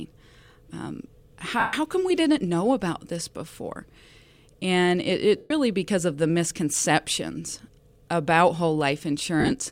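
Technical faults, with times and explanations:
1.59–1.73 s, lost LE Audio frames: a 135 ms gap is bridged by the LC3 decoder repeating the last spectrum with randomised signs, so the speech turns to a noisy smear that fades toward silence, consistent with a run of 7.5 ms frames.
5.37–5.51 s, lost LE Audio frames: another 135 ms concealment, with the same smear and fade.
9.40–9.52 s, lost LE Audio frames: 75 ms of losses scattered over 112.5 ms, the longest run about 30 ms, giving brief rough patches rather than a full fade-out.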